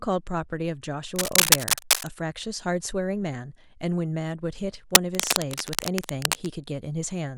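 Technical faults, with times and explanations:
1.16–2.08 s and 4.92–6.50 s, cable scratch noise: dense, irregular scratching and rustling bursts sit about 5 dB louder than the speech. The sound is likely a worn cable or connector being moved, its contact resistance flickering rapidly and injecting crackly noise bursts.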